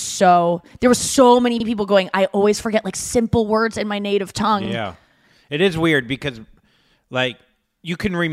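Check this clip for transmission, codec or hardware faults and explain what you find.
Overlapping chunks stutter this speech at 1.60, 4.65 and 7.70 s. Each chunk, spaced 3.0 s apart, starts 50 ms before the previous one ended, so that stretch plays twice, heard as a brief click-stutter. A spectrogram shows a duplicated 50 ms slice; the waveform shows a discontinuity at each join.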